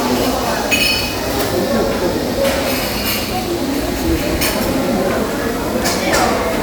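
No technical faults can be heard anywhere in this recording of everyday sound.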